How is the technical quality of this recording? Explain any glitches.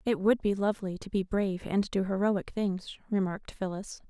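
No technical faults can be heard in this speech recording.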